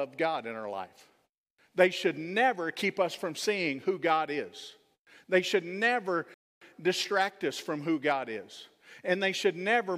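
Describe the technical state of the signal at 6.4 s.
At 6.4 s you're right inside a rebuffering stall, running from about 6.34 to 6.61 s. The player ran dry of downloaded audio just after "should never" and simply went silent until more data turned up. Then the speech picks up exactly where it left off, with "distract us from who." Nothing's missing, but the gap inserts about 0.27 s of dead air into the timeline.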